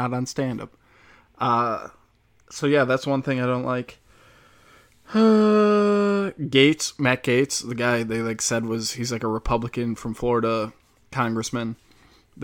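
No technical faults are audible.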